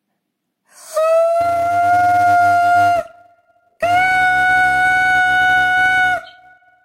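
A filter restarted on every block is at fault here: from 1.41 s to the end of the audio, a filter in the chain drops its stored state at each block boundary and begins processing from silence. Each restart leaves a small transient, and because they recur 200 times a second (a block about 5 ms long), they fuse into a steady 200 Hz buzz under the sound that grows and shrinks with its level.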